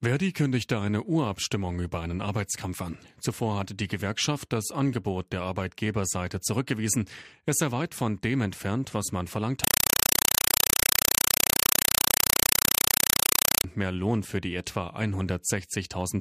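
Right after "entfernt was man verlangt", from 9.64 to 13.64 s, it's a compressed stream played as audio: undecoded AC-3 bursts, 4 ms each at 31.25 Hz, make loud chattering static.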